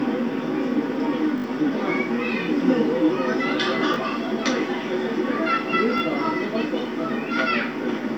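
At 1.38 to 1.44 s a repeated buffer occurs: fresh audio arrived late, so the same 20 ms slice was replayed, heard four times in a row as a brief buzzing stutter, with roughly 70 ms of sound skipped. Shorter repeats at 3.94 to 3.96 s and 5.98 to 6.00 s give single clicks, losing about 20 ms each. A waveform shows identical 20 ms segments butted together with hard edges; a spectrogram shows thin vertical lines at each join.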